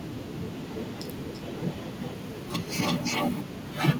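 Echo leak from 0.0 to 3.73 s: a delayed copy of the speech trails it by 335 ms, only slightly quieter, likely from a loudspeaker echo canceller missing the returned sound.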